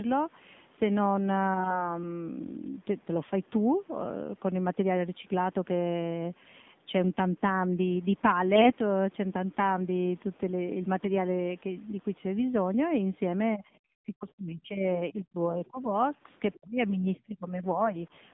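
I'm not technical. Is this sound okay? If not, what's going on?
No. The whole clip went through the AMR narrowband mobile codec, the speech format of older mobile calls. It keeps only a narrow slice of sound, roughly 150 Hz to 3.6 kHz. So the speech sounds thin and muffled. The squeeze also makes it plainly buzzy and synthetic.

There are three short bursts of AMR bit errors: 1.54 to 1.90 s, 8.54 to 8.72 s, and 10.96 to 11.07 s. A weak signal scrambled part of the transmitted data. The voice keeps its pitch and loudness but turns hoarse, scratchy and gargly. The last burst is milder.

Near the end the speech keeps fading out. The first dip is small, from 13.50 to 13.64 s. From 13.98 to 15.94 s it drops to near silence at its worst, and from 16.57 to 17.97 s it sinks deeply again. This is likely speech suppressed in double talk. Both sides talked at once, and the call's echo control turned this talker down.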